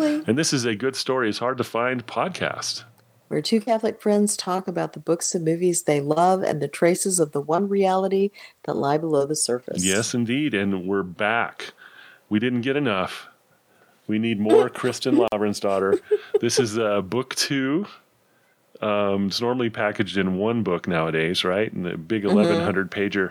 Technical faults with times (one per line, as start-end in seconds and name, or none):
15.28-15.32 gap at a join of encoded pieces